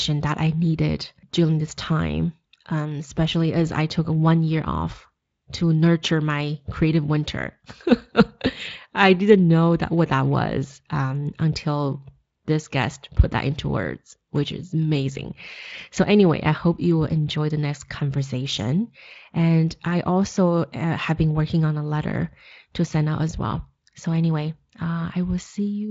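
Nothing in this speech stood out as a technical fault on listening.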